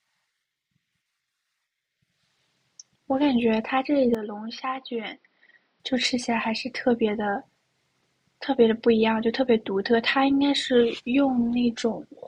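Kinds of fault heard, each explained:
Input switched to a poorer device: likely a change of microphone, as the speech turns dull with nothing above 5.8 kHz from 4.15 to 5.80 s, about 10 dB quieter, spectrogram top sharply cut.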